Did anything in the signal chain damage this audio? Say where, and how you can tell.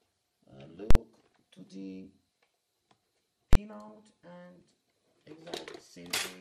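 Yes. Three kinds of damage can be heard.

The whole clip carries MP2 compression damage, most likely from an MPEG Layer II encoder at a low rate, which fits around 80 kbps. At that budget the encoder can't fund all 32 sub-bands, so the upper bands drop out and the surviving ones are quantised roughly. Throughout, the top end sounds dull and unsteady, and a granular, gurgling grit sits on the sound.

Invalid numbers at full scale appear twice, from roughly 0.91 to 0.95 s and again from 3.53 to 3.55 s. A processing or sample-format stage produced non-finite values, and these were clamped to the extreme sample value for a whole block. The longer event lasts about 46 ms, which fits a 2048-sample block. The shorter one lasts about 23 ms, which fits a 1024-sample block. Each is heard as a violent burst rather than as program.

DAB burbling occurs from 1.32 to 1.40 s and from 5.65 to 5.86 s. This damage comes from the broadcast reception path. 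Bit errors, at a rate that points to a few tenths of a percent, slipped past error correction into the MP2 stream. The corrupted samples put short blips of noise into single sub-bands. The result is a burbling distortion laid over the sound.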